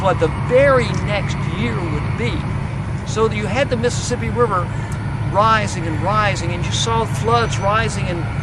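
No technical faults can be heard anywhere in the clip. Nothing in the audio points to a problem in the recording or playback chain.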